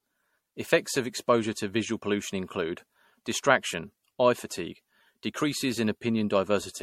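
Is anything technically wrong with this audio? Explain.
Yes. Generation loss runs through the whole speech clip. The sound is swirly, smeared and hollow, consonant attacks are blurred, and nothing is present above about 16.3 kHz. This is likely the result of repeated lossy coding: the pattern points to MP3 at around 70 kbit/s, decoded and re-encoded roughly seven times. Each pass quantises again on a shifted frame grid, so noise and spectral holes accumulate, and the degradation is worse than a single encode at that bitrate would produce.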